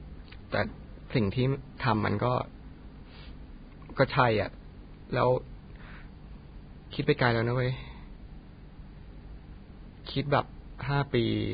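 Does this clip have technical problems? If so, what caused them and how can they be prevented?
Yes. Vorbis compression affects the speech throughout the clip, and nothing is heard above about 4.9 kHz. The most likely cause is lossy encoding at a very low rate, around 16 kbps. At that rate the encoder lowers its cut-off and quantises the remaining treble so coarsely that fine detail turns into hiss-like noise of similar energy. Consonants sound grainy and smeared, and tones take on a rough edge. To prevent it, encode at a higher Vorbis quality setting or keep a lossless master.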